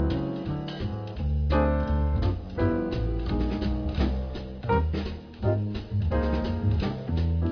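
No technical faults can be heard anywhere in the clip. Nothing interrupts or degrades the sound at any point.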